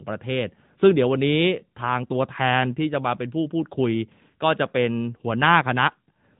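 From start to finish, the speech carries the sound of the AMR narrowband mobile codec. Nothing above about 3.8 kHz survives, so the voice is thin and boxed in, like an old phone call. The codec rebuilds speech from a vocal-tract model fed by a few pulses per short subframe. At this rate the damage is plainly audible. There is a buzzy, synthetic edge, which fits the 10.2 kbps mode.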